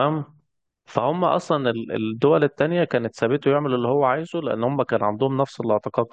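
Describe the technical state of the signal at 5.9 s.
At 5.9 s the speech signal is intact, with no audible technical fault at that point.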